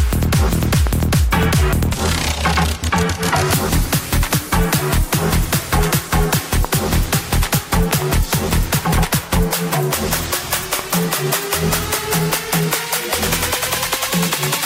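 Loud pops hit at 0.87–1.02 s and 7.91–8.04 s as quick doubles, with singles at 6.65–6.67 s and 10.79–10.81 s, jumping well above the sound, likely from voltage spikes.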